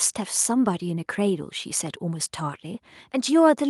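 No technical faults can be heard anywhere in the recording; the signal holds steady, with nothing disturbing it at any point.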